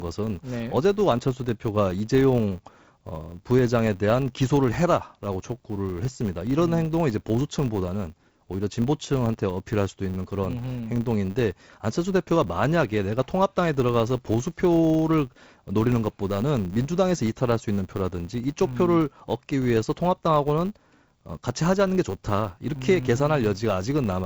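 A speech clip with a steady 100 Hz buzz throughout, from a filter restarted on every block. Each 10 ms block starts from silence, so its transient ticks along with the speech level. The audio, carried over G.722 wideband telephone coding at 48 kbit/s, stops a little above 7 kHz with light codec damage.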